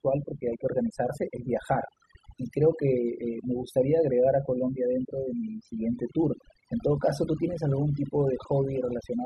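Throughout the speech, overdone noise removal is audible: the noise reduction was set so aggressively that frequency bands near its noise estimate are cut almost to nothing, taking quieter speech detail with them. The background drops and breaks up into twinkling specks.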